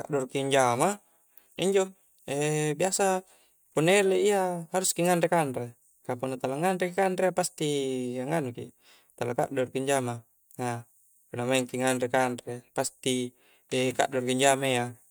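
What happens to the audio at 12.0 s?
Nothing goes wrong at 12.0 s; the speech carries straight through that moment without any audible fault.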